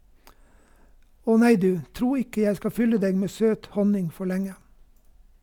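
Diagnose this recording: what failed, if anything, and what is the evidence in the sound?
Nothing failed; no fault is audible in this speech.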